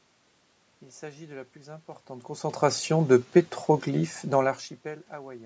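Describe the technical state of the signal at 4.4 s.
At 4.4 s the audio is intact, with no technical fault in the signal.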